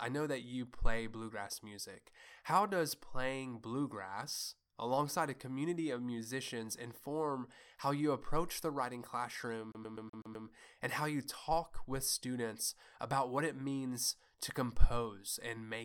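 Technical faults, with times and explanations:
9.72 to 10.47 s, CD stuck on one turn: after "approach the writing classroom", a scratch keeps throwing the laser back one track, so the same 0.13 s slice repeats six times, each jump clipped by a brief mute, giving a fast, even stutter before "and how you talk".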